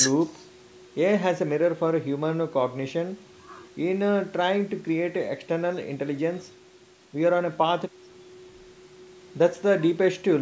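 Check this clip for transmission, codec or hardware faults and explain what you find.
I find no faults in this clip.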